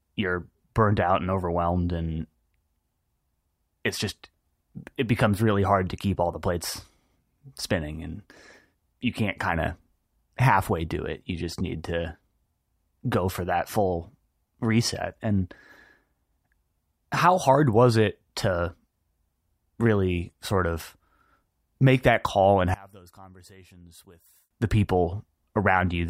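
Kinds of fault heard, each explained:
One channel inverted: Right after "make that call and", from about 22.74 to 24.51 s, the level drops by about 26 dB and only a quiet residue comes through for nearly two seconds before things snap back. The likely cause is one side of a stereo pair flipped in polarity, so when the two were summed to mono, everything they had in common cancelled and only the difference between them was left.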